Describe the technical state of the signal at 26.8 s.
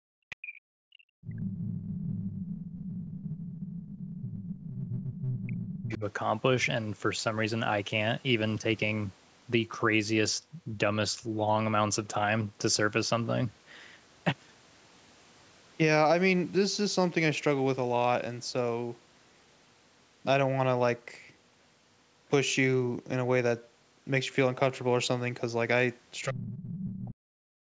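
At 26.8 s the other side's voice is leaking through, from 26.23 to 26.85 s, roughly 10 dB below the speech. This is likely loudspeaker echo that the canceller left in the microphone signal. It sounds like a second voice, and a spectrogram shows a fainter overlapping harmonic pattern.

Over the same moment, speech is suppressed in double talk from 26.25 to 27.47 s, likely because the canceller couldn't separate the talker from the echo and attenuated both. The voice drops in pieces, at worst by about 35 dB, for about a second in total. On the waveform the envelope collapses in patches.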